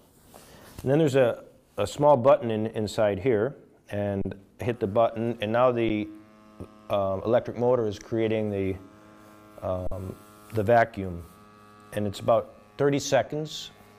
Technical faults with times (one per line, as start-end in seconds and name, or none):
4.21-4.25 underrun with held sample
5.89 underrun with held sample
9.87-9.91 underrun with held sample